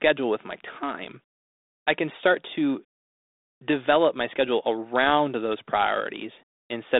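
Nothing stood out on listening to this speech, which comes through a 32 kbit/s G.726 telephone path limited to roughly 250 Hz to 3.7 kHz.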